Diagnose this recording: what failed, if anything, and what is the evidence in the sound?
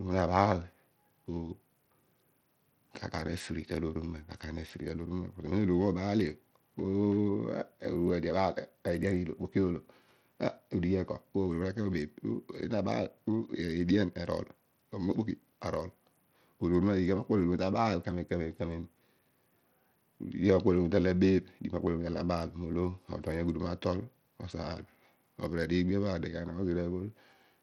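Bluetooth SBC compression, heard throughout the speech: the treble thins and flickers, and a gritty, grainy noise rides on the sound. At the codec stage, the likely cause is an SBC link starving its upper sub-bands of bits, which fits a bitrate near 80 kbps.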